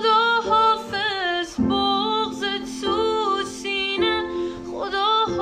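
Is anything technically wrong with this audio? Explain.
No, nothing in this audio points to a technical fault.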